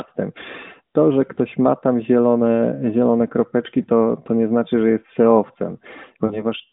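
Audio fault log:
1.34–1.38 s, 3.82–3.88 s, 6.26–6.45 s: lost AMR speech frames. Single 20 ms frames lost just after "to że" and after "kropeczki", then two frames (40 ms) near the end. The decoder repeats the last pitch and vocal-tract settings at falling gain, causing brief warbles. The waveform shows short amplitude dips, and the spectrogram shows smeared, fading harmonics within the 200 Hz–3.6 kHz band.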